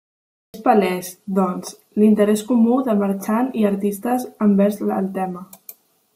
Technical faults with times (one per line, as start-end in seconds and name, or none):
0.00-0.54 cut-off start